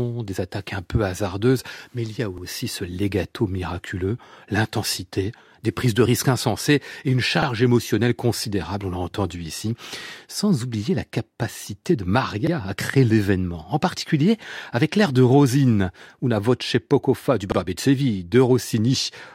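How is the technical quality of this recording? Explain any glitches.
The recording suffers from overlapping chunks. The audio was handled in 5-second blocks, and each block began about 48 ms before the previous one finished, so that sliver of speech plays twice at every join. The result is a brief stutter at 2.38 s (after "mais il y a"), 7.42 s (after "risques insensées et une"), 12.47 s (after "oublier la capacité de") and 17.52 s, repeating every 5 s.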